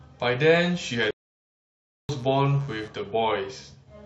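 From 0.5 s a mains buzz comes in under the speech and lasts until about 2.88 s. Switching spikes riding on a 60 Hz supply have leaked into the signal path, producing a harsh, raspy drone roughly 25 dB below the speech. On a spectrogram it appears as a comb of evenly spaced horizontal lines at 60 Hz multiples, climbing into the kilohertz range. In the waveform it is a fine, regular ripple in the gaps between syllables.

At 1.11 s the speech breaks off mid-flow in a playback stall and stays silent for about 0.98 s, picking up again at 2.09 s. This is likely the player running short of data or being held up until it could catch up. The waveform shows a flat stretch of nearly a second between two sections of activity. The spectrogram shows a vertical empty band across all frequencies at the same point.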